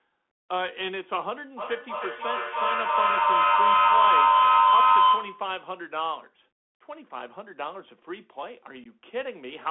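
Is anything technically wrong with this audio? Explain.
Yes, there are three problems: a narrowband codec across the whole clip, a feedback howl, and a brief dropout near the end.

The Bluetooth CVSD headset codec is present throughout. Its one-bit delta coding, with an adapting step, limits the speech to roughly 200 Hz to 3.4 kHz. Loud high-frequency energy outruns the step, so sibilants sound scratchy over a plainly audible granular hiss.

A feedback howl runs from 1.57 to 5.57 s. A microphone-to-loudspeaker loop gains level on each pass and settles on a tone around 1 kHz. It peaks about 11 dB above the speech and repeats roughly every 0.3 s, which matches the loop delay.

Unconcealed Bluetooth headset packet loss occurs between 8.84 and 8.87 s. Around 15 ms of audio, which fits a couple of lost packets, is replaced with silence or an idle pattern. The result is a short hole with abrupt edges, and the speech resumes briefly quieter as the CVSD decoder's step recovers.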